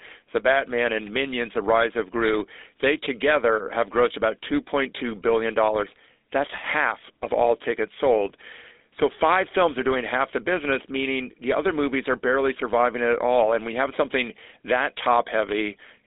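From start to finish, the speech passes through a GSM full-rate codec. Nothing survives above about 3.8 kHz. The band sits near 300 Hz to 3.7 kHz. The codec rebuilds the voice from sparse pulses, which fits 13 kbps coding. It sounds plainly buzzy and gravelly.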